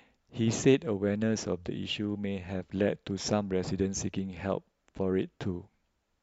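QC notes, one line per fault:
No faults found in the speech recording. Nothing was heard that calls for a QC entry.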